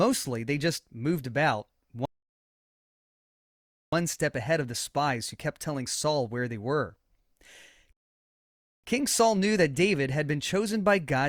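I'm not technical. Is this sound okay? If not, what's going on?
No. The speech twice halts in rebuffering stalls, at 2.05 to 3.93 s and 7.93 to 8.84 s, going silent for about 1.9 s and 0.9 s. The player ran out of downloaded audio and waited for more, then resumed exactly where it stopped, so nothing is lost.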